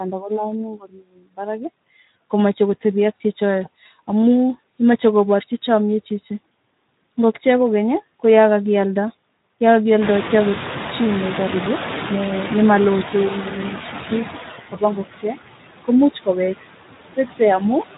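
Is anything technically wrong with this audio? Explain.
Yes. Two faults run through the whole speech clip.

Noise suppressor artifacts are present from start to finish. The suppressor pulls down bands it judges to be steady noise, by about 17 dB. The background dips between phrases and swells under speech. After about 10 s the room noise jumps by about 22 dB, to about 10 dB below the speech.

Speex codec damage is plainly audible throughout. This CELP codec models the voice with a limited excitation signal. The coarseness heard here fits a bitrate around 11 kbps. Too few bits go to that excitation, so the speech sounds noisy and hoarse.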